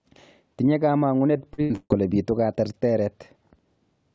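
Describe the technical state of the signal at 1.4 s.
Choppy and robotic, with pieces of the speech dropping out. At 1.4 s the signal is inside a stretch of repeated packet loss (robotic sound) running from about 1.38 s to 1.92 s. Four separate gaps occur in that half-second, the longest about 145 ms. Each is patched by stretching the last received sound forward, so roughly half of the span is concealment rather than real audio. Nothing above 8 kHz, which fits a wideband call codec such as G.722.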